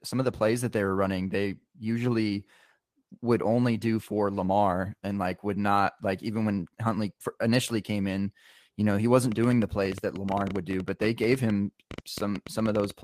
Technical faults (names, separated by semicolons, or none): train of clicks